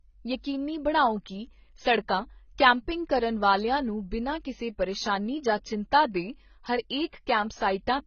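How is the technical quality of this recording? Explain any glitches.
Technical quality is poor: heavy compression damage runs through the entire clip. Throughout, the speech sounds dull and smeared, with nothing above 6.5 kHz. This is likely AAC compression at a very low bitrate, around 16 kbps, discarding high frequencies. A spectrogram shows a flat ceiling at 6.5 kHz.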